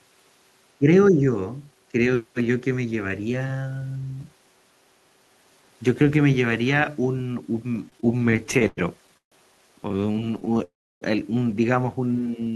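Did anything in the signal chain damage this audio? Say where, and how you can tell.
Yes, call processing and the network path both damaged it.

Speech suppressed in double talk, at the call-processing stage: the sound dips about 15 dB at 0.78–0.87 s and about 5 dB at 1.11–1.22 s. These are level drops, likely from an echo canceller ducking during overlap, and not gaps filled by a stalled buffer.

Repeated stalls (stutter), on the network: the audio stutters at 7.89–9.34 s (19 gaps, longest 143 ms) and 9.84–10.58 s (15 shorter gaps). The last sound is held each time with nothing lost, so the clip drags rather than skipping.

Call audio freeze, likely on the network: at 10.64–11.03 s the sound is held and then falls silent for about 0.31 s before resuming where it stopped. It is one long hold, unlike the choppy repeated stalls.

Jitter buffer slow-down, in the receive buffer: at 12.20–12.52 s the audio runs at 91% speed with 38 ms added. 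The pitch is unchanged, so this is stretching rather than a playback-rate error.

Short stall from a late packet, in the receive buffer: at 12.44–12.48 s a sound is briefly held, adding 17 ms. It is a single tiny hold, far shorter than the freeze.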